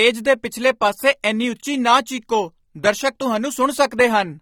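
From start to finish the speech sounds dull and smeared, with a fizzy, warbling texture on sibilants and held sounds, and nothing above 19.3 kHz. The cause is AAC compression, likely AAC-LC at a low bitrate. The encoder quantises each frame's spectrum coarsely, leaving holes and noise-filled bands. The damage is plainly audible and fits a rate near 32 kbps. A simple low-pass filter would only remove treble, while these spectral holes add fizz and smearing.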